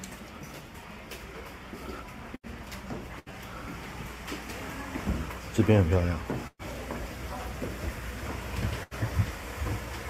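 At 2.35, 3.19, 6.47 and 8.83 s, a burst of packet loss drops consecutive stretches of the stream, 80 ms each time except 120 ms at 6.47 s. The receiver bridges each hole by extending the last sound and fading it, so the preceding tone stretches into a dimming buzz or hiss for about 70 to 120 ms before the sound jumps ahead. At 3.19 s the patch overruns by about 10 ms, and at 6.47 s about 30 ms of silence closes it.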